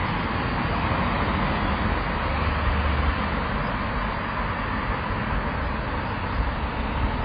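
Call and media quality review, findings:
Dull, muffled sound for the whole clip; nothing above 5 kHz, so top end and air are gone. Sustained parts warble; noisy, hissy components turn smeared and fizzy. Likely cause: heavy AAC compression (AAC-LC), consistent with a very low bitrate around 16 kbps. Encoder lowered bandwidth to 5 kHz and quantised remaining bands coarsely, leaving swirling texture.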